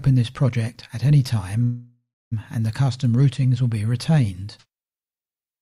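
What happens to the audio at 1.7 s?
A call audio freeze runs from 1.63 to 2.34 s. The last sound stretches into a fading buzz or hiss, then about 0.27 s of silence. Delayed packets likely emptied the jitter buffer. Playback then resumes where it stopped, 0.68 s late, with nothing lost.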